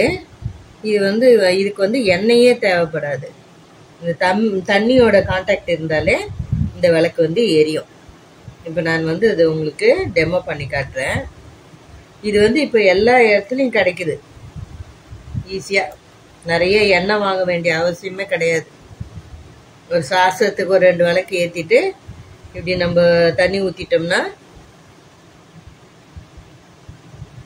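Nothing here stands out as a fault; the audio runs along without any audible glitches, dropouts or odd artefacts to point to.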